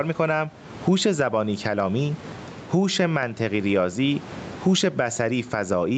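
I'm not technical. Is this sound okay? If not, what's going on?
No. Gain pumping runs through the whole clip, so the level keeps breathing up and down by a large amount. The likely cause is a microphone level set far too high, with an automatic level control quickly turning it down whenever a loud sound arrives. Loud and soft moments end up squeezed close together, which makes the speech sound flattened.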